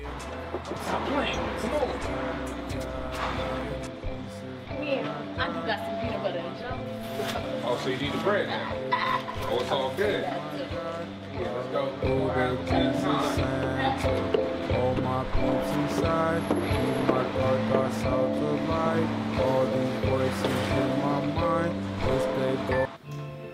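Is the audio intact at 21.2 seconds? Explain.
Yes, at 21.2 seconds the audio plays through cleanly, with no dropout, click, distortion or other fault to be heard.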